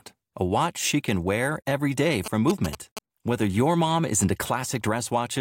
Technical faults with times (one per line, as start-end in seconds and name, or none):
2.26-2.99 GSM signalling bursts